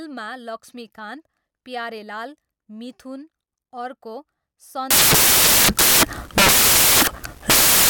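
From 4.91 s to the end at 7.90 s, the speech turns into loud, harsh broadband noise: samples built from the wrong bytes, with the rapidly varying low bits now forming each value's bulk. A spectrogram shows broadband noise filling every frequency.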